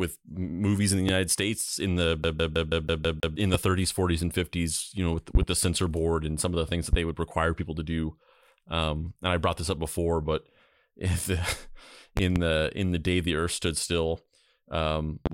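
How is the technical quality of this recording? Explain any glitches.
The recording is marred by two kinds of glitch: repeated loud pops and one stretch of skipping-CD stutter.

Loud pops sound as sharp clicks about 15 dB above the speech, which carries on underneath. They occur at 1.09 s just after "movies in the", at 3.54 s after "in the", at 6.93 s, and at 15.26 s after "earth stood still um". There are double pops at 5.35 to 5.45 s and 12.17 to 12.39 s. The likely cause is a sudden voltage step from a plug, switch, static or driver glitch, shaped by the circuitry after it.

The CD stuck on one turn fault appears from 2.23 to 3.36 s as a fast, even stutter. The same 162 ms fragment repeats seven times, each jump marked by a brief mute, as a scratch throws the laser back to the same spot every revolution.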